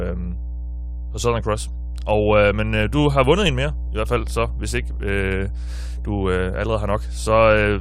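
From start to finish the speech sits on a steady mains hum at 60 Hz, strong enough to be only slightly below the speech itself. Power-line current is leaking into the signal path, from a ground loop or a nearby transformer, leaving a constant low drone.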